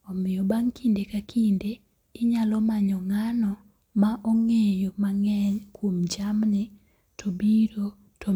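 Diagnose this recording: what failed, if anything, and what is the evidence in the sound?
Nothing in the recording points to a failure at any stage of the chain. The speech comes through with no audible event that would call for a diagnosis.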